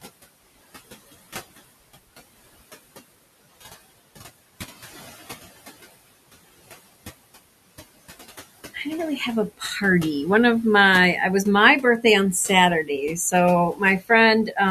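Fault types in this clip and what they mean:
noise suppressor artifacts: a suppressor pulls down bands it treats as steady noise, cutting the background by about 17 dB, so it dips between phrases and swells under speech.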